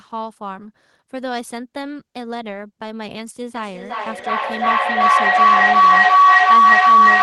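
At 3.55 s a feedback howl begins. Two devices in the same room are joined to the call, so the microphone picks up the loudspeaker and the loop returns more level each pass. Instead of dying away, the repeats narrow onto a tone of roughly 1 kHz, coming round at about 400 ms intervals, the loop's round-trip delay. It climbs to about 16 dB above the speech and runs unbroken to the end of the clip.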